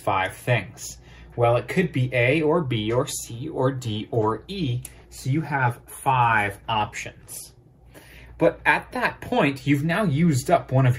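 At 4.23 s the sound turns coarse and watery, with the top end dulled and detail smeared. It stays at its roughest for about 3.8 s before clearing at 10.07 s. This is a call bitrate drop: the call's bandwidth estimate fell, so the encoder was given far fewer bits, which fits a fall from around 96 kbps to about 24 kbps. At that rate it quantises coarsely and trims high frequencies until the bitrate recovers.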